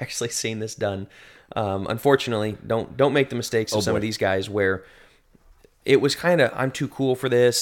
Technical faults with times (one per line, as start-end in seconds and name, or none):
none